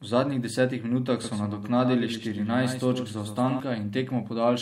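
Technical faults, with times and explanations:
1.24–3.60 s, doubled audio track: right after "zadnjih desetih minutah" a dry copy, around 10 dB down, trails by roughly a tenth of a second, likely from a second, slower capture path.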